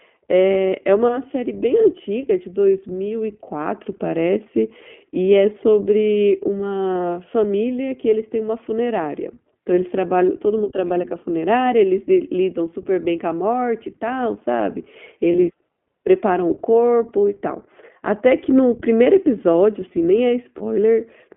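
Throughout, the speech carries the iLBC codec's narrowband sound. Nothing sits below 200 Hz or above 3.4 kHz, so a spectrogram shows a flat ceiling. The frame-by-frame excitation coding leaves a plainly audible rough, synthetic edge, which fits the 15.2 kbps mode with 20 ms frames.

Lost iLBC frames occur at 13.60 s, from 15.32 to 15.36 s, and from 20.58 to 20.62 s, each about one 20 ms frame. The decoder fills the gap by repeating the last pitch cycle mixed with noise, which sounds like a brief held, buzzy vowel. On a spectrogram it appears as a short stretch of copied harmonics over a haze of noise. Because each frame decodes on its own, the speech recovers right after.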